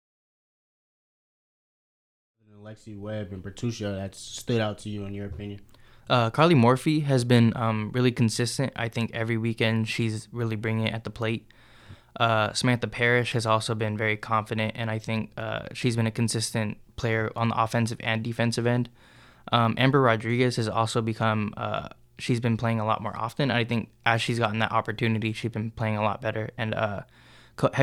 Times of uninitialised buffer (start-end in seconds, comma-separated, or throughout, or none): none